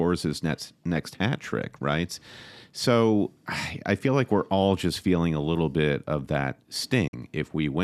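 A digital broadcast dropout occurs from 7.07 to 7.14 s, late in the speech. The receiver stopped getting valid frames and muted, so the sound fades to silence over 8 ms and then resumes. The 48 ms of lost programme fits two dropped frames.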